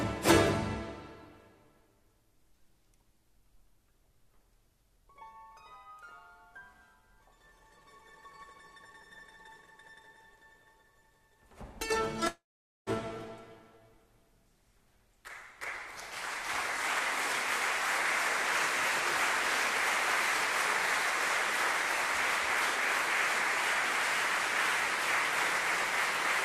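At 12.27 s the sound cuts out and the last fragment carries on as a fading buzz, decaying to near silence before audio returns at 12.90 s with 600 ms missing. This is likely a long network dropout, concealed by the receiver.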